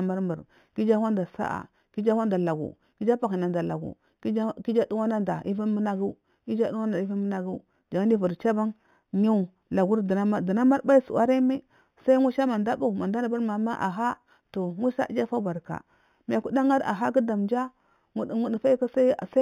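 Imaging from linear upsampling runs throughout: straight-line interpolation from what sounds like an 8 kHz source leaves faint mirrored images between 4 kHz and 8 kHz, some 35 dB down, adding metallic shimmer to sibilants.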